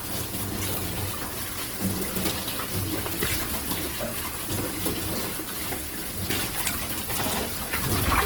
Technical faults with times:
0.00-8.25 Opus compression

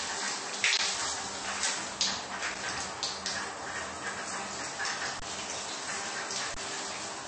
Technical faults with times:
0.00-7.27 MP3 compression
0.77 underrun with held sample
2.30-2.59 loose connector crackle
5.20-5.22 underrun with held sample
6.54-6.57 underrun with held sample

